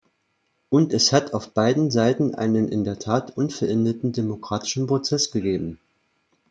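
No technical faults can be heard anywhere in the recording, and the signal holds steady throughout without any audible disruption.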